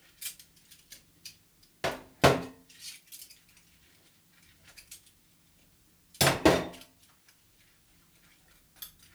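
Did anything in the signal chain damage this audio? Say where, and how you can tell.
Yes. The damage is at a sample-format conversion stage: a steady, even hiss sits under the sound for the whole clip with no distortion, about 40 dB below the signal. This is low bit depth with dither: reducing to 10 bits with dither turns rounding error into constant white noise.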